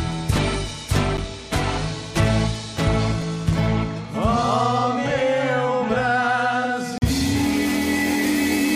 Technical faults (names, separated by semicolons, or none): block of digital silence